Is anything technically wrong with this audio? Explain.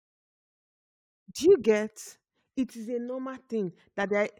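No, nothing technically wrong stands out on this speech recording.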